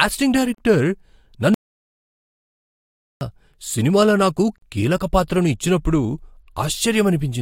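At 0.55 s there is a gap at a join of encoded pieces: a 38 ms hole with smeared edges, left by untrimmed encoder start delay and end-frame padding. From 1.54 to 3.21 s, an audio dropout to silence cuts the speech to silence with no room tone, likely lost input while silence kept being written. The sound returns at "సినిమాలో నాకు కీలక పాత్రను". At 4.58 s, between "సినిమాలో నాకు" and "కీలక పాత్రను ఇచ్చినప్పుడు", a second join gap of 40 ms falls exactly 4 s after the first, which fits separately encoded 4-second pieces.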